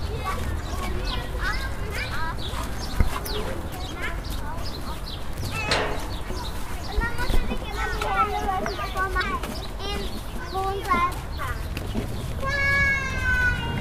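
At 0.56–0.61 s, 4.35–4.40 s, 9.19–9.23 s and 11.35–11.40 s, damaged data in a compressed stream breaks the decoding. The decoder misreads corrupted frames and resynchronises, producing brief glitches. Each shows as a roughly 44 ms disturbance on a spectrogram and a jagged discontinuity in the waveform.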